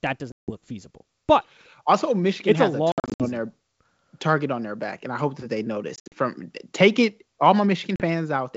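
Packet loss on an ADPCM call cuts hard-edged silent holes at 0.32–0.51 s after "that does", 2.92–3.29 s, 5.96–6.14 s after "I hope that they", and 7.96–8.03 s after "take it all". The decoder's predictor and step size lose track of the sender's, so speech resumes slightly distorted before settling.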